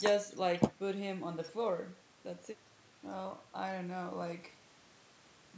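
Listening through the speech, which carries the usual bandwidth of call microphone processing with nothing above 8 kHz, nothing stood out as a fault.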